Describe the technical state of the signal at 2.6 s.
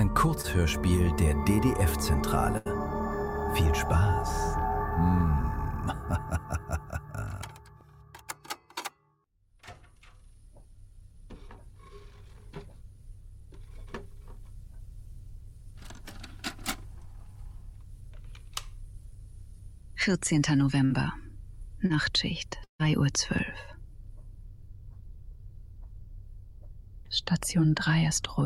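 A burst of packet loss from 2.57 to 2.67 s leaves about 80 ms concealed by extending and fading the last sound, so a held buzz or fading hiss replaces the missing audio.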